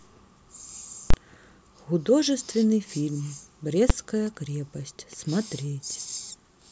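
A calculation in the speech processing chain produced invalid numbers, which were pinned at full scale. From 1.10 to 1.14 s this 32 ms block, fitting a 512-sample buffer, gives a loud pop, a gap, then another pop; at 3.9 s a shorter block, fitting 128 samples, lands as a single bang.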